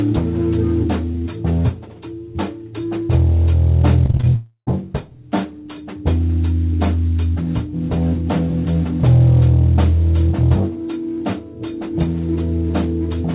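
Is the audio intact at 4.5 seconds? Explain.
No. From 4.36 to 4.83 s there is a long network dropout, likely. About 0.32 s never arrives; the receiver stretches the last sound into a fading buzz or hiss for roughly 0.31 s, then about 0.1 s of silence. A brief packet loss would be concealed rather than fading to silence.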